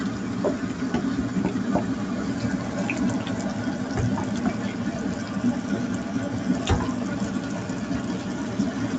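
No technical faults can be heard in these sounds, which come through a call path that stops at 8 kHz.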